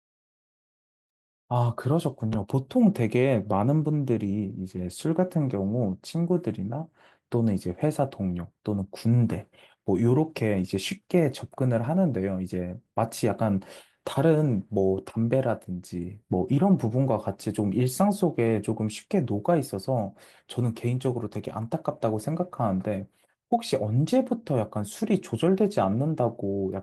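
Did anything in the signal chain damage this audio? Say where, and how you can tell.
No, nothing in the signal chain damaged this speech.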